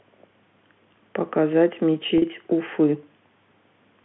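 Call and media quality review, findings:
Packet loss with pitch repetition, 2.18 to 2.22 s. A 40 ms gap, consistent with two 20 ms packets, is bridged by the receiver's concealment repeating the last pitch period. The speech briefly holds on a slightly buzzy, sustained tone before resuming. Probable component: network path or jitter buffer. The narrowband G.711 line, about 150 Hz to 3.5 kHz, carries the repeated period cleanly.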